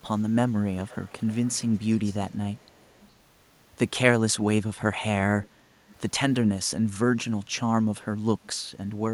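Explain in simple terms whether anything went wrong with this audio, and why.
Something did go wrong. A faint, delayed copy of the speech comes back on top of the live speech. This is an echo leak. It happens from 0.79 to 2.3 s and from 2.55 to 3.11 s, then in two brief scraps at 5.42 and 5.9 s. The copy trails the original by about 0.41 seconds and stays quiet. The likely cause is a loudspeaker on the far end whose echo canceller missed part of the sound, so it was sent back.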